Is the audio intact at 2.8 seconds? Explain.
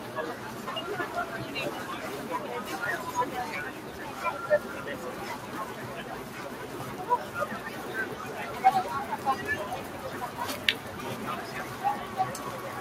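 No. At 2.85 s a block of digital silence drops about 5 ms, which fits a 256-sample buffer left unfilled, heard as a tick. The waveform shows a flat gap, and the spectrogram shows a vertical stripe at each edge. Across the clip, a noise suppressor applied to sounds lowers held tones and tails by about 5 dB, so the sound pumps. The spectrogram shows tails fading early.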